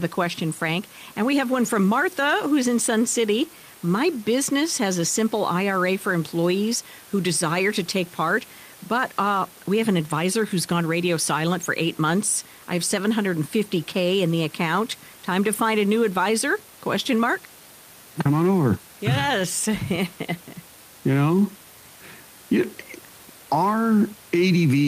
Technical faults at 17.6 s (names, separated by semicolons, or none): none